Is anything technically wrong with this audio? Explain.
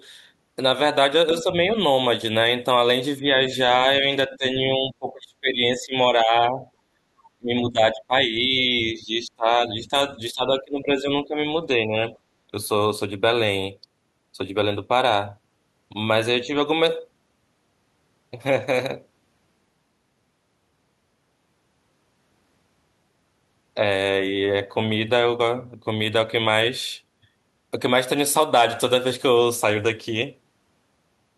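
Yes, two echo-canceller problems. Speech suppressed in double talk shows up at 1.41–1.72 s and 16.42–16.57 s as brief dips of roughly 5 dB, and at 3.21–6.65 s and 7.36–12.13 s as drops of up to roughly 20 dB. It's likely the canceller mistaking the near-end talker, overlapping the far end, for echo. Background gated by the echo canceller hits at 6.93–7.08 s: the room tone drops about 23 dB while the far end plays, then snaps back.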